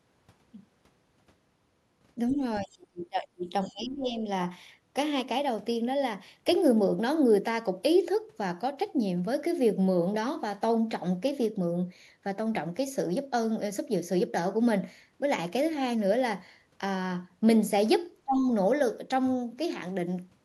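From 2.28 to 2.34 s, 2.63 to 2.7 s and 3.64 to 3.74 s, faint scraps of the other side's voice leak through, likely echo left behind by the echo canceller. The speech is suppressed in double talk: it dips slightly at 2.35 s, then drops away deeply from 2.6 to 3.53 s, 3.7 to 4.19 s and 18.24 to 18.47 s, likely because the canceller turned down both sides while they overlapped.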